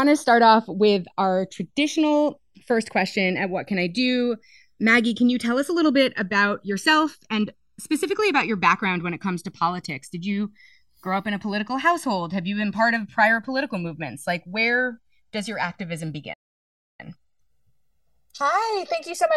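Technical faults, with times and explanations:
Throughout: channels drifting apart. The two channels run on clocks that disagree by around 70 ppm, so the inter-channel delay slowly grows to roughly 1.5 ms by the end. In mono the resulting comb notches glide through the spectrum, heard as a slow flanging sweep.
16.33 to 17.00 s: playback stall. The speech cuts out mid-flow and the output stays silent for about 0.65 s before resuming. The gap points to the player having likely run short of data or had its audio thread blocked until it recovered.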